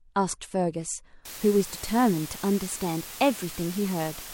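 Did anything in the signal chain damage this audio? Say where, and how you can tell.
Yes. From 1.25 s to the end, a sample-format conversion requantized the speech to very low bit depth with dither, consistent with about 5 bits. The rounding error was randomized into a steady, even hiss roughly 15 dB below the speech, with no accompanying distortion.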